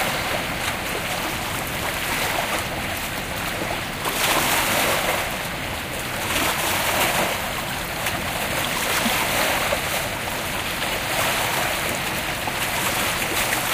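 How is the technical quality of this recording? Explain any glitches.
The recording has one audible glitch, a short skip in the sound a little past the halfway point.

Compressed frames skipped, from 7.19 to 7.25 s: frames of the encoded stream never reached the output, either lost from the file or discarded by the decoder as corrupt, so playback leaps forward by around 70 ms of material. The sound jumps ahead at that point.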